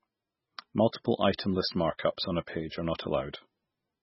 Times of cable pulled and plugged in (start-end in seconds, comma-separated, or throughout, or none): none